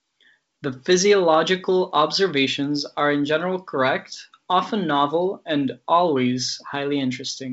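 Speech carried over G.722 wideband telephone coding, with nothing technically wrong with it.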